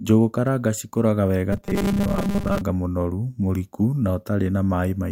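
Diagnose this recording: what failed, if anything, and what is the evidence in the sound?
From 1.53 to 2.61 s the speech becomes robotic sound from repeated short buffers, a rigid metallic buzz near 200 Hz. The stage is likely the driver or buffer: about half the audio is replaced by a repeated 5 ms chunk, imposing a buzz at its rate.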